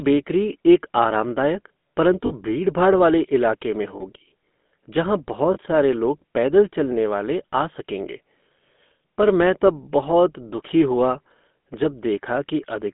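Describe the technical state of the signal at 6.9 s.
At 6.9 s the speech is carrying GSM full-rate codec damage, as it does across the whole clip. The coder models the vocal tract and drives it with a sparse, regularly spaced pulse excitation, which fits a 13 kbps GSM full-rate path. The result is a plainly audible buzzy, gravelly roughness. On a spectrogram, energy sits within roughly 200 Hz to 3.5 kHz with nothing above, and harmonics look smeared and grainy.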